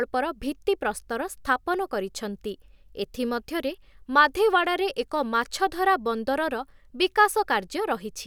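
No audible technical faults anywhere in this speech recording.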